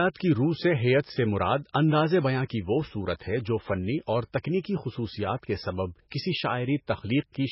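The speech has been squeezed through what is likely heavy MP3 compression, at a data rate that sounds as low as about 16 kbps. Starved of bits, the encoder has cut the treble outright, leaving nothing above 5.6 kHz, and has dropped weak frequency lines that then flicker in and out between frames. The result is dull, watery and swirling throughout, with s sounds turned metallic and chirpy.

The same block-based coding causes pre-echo three times. When a sharp onset lands late in a coding block, the quantisation noise meant for the loud part spreads back into the silence before it. At 1.73 s, right after "سے ہیئت سے مراد", an 18 ms smear of hiss runs ahead of the attack. From 4.60 to 4.64 s, after "ہے جو فنی اور", the pre-echo stretches to 40 ms, softening the onset. From 6.10 to 6.12 s, after "کے سبب", a 21 ms wash of noise again blurs the attack.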